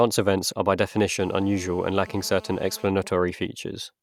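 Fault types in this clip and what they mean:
GSM phone buzz: A hard, raspy buzz rich in harmonics sits under the speech from 1.19 to 2.88 s, starting just after "events are by", at about 24 dB below the voice, and it has no relation to what is being said. It holds steady throughout, as during a phone call: a nearby 2G handset transmitting bursts about 217 times a second, with the audio circuitry rectifying those radio pulses into an audible 217 Hz tone.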